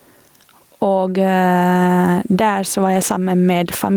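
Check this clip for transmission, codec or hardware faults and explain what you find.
Gain pumping runs through the whole speech clip. The level ducks by around 10 dB under every loud syllable, likely from input gain set too high with a fast limiter clamping it. Unlike a noise gate, pumping lifts quiet parts rather than cutting them to silence.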